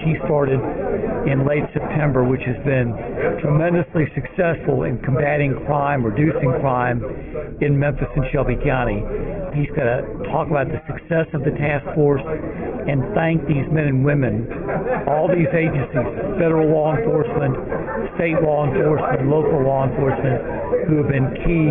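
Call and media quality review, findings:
No audible faults found in the call audio; no symptom to ticket, no component implicated.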